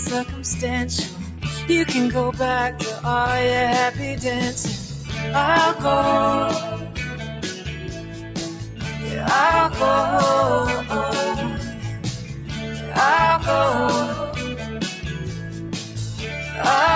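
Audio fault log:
Throughout: noise suppressor applied to music or sounds. A speech-tuned suppressor keeps treating sustained parts of the sound as noise, so level swings by around 10 dB and the sound pumps. On the waveform, held portions sag while onsets stay tall. The spectrogram shows tails thinning, with nothing above 8 kHz from the call path's band limit.
4.93–5.1, 6.8–6.97, 7.16–7.43, 7.68–8.36, 8.58–8.81, 12.16–12.52, 15.26–15.97 s: sound cut by the noise suppressor. Each time, steady or fading sound is pushed down by about 4 to 5 dB while sharper parts pass. The waveform shows a brief dip in the envelope, and the spectrogram shows a faded band across those spans.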